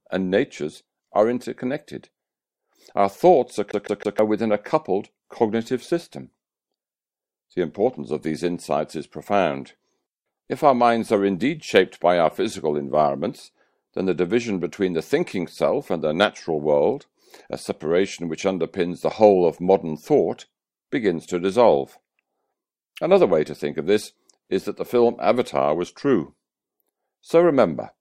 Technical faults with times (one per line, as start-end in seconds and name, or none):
3.71-4.19 CD stuck on one turn